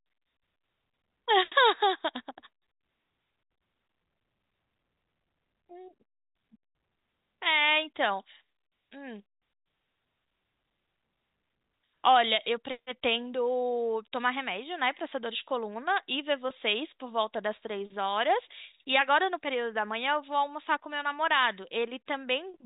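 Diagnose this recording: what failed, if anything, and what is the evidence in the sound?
Nothing in the chain has failed: the speech carries the expected character of G.711 telephone coding, with its band ending at 3.8 kHz as that format dictates.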